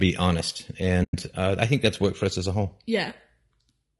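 AAC frame loss with muting at 1.03–1.14 s cuts a soft-edged 100 ms hole in this speech, consistent with roughly five lost frames zeroed and faded through overlapping windows. Low-delay AAC compression, likely AAC-ELD, makes the voice rough and grainy throughout, with noise between harmonics and a lowered or synthetic top band that points to roughly 32 kbps.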